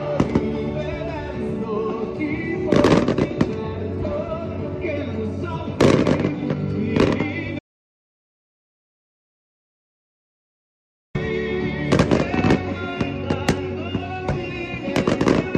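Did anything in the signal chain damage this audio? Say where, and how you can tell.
Yes. There is an audio dropout to silence from 7.59 s to 11.15 s, about 3.6 s of nothing at all. The sound stops mid-flow and resumes just as abruptly, and the gap holds no room tone or noise floor, only silence. The input was likely lost upstream of the recorder, through a disconnected device, a failed link or an accidental mute, while the writer kept producing empty samples. Whatever occurred in that span is unrecoverable.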